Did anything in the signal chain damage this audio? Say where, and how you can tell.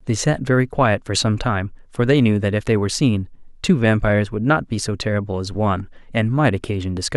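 No, nothing in the signal chain audibly damaged this speech recording. No stage leaves a mark that can be heard anywhere in the clip.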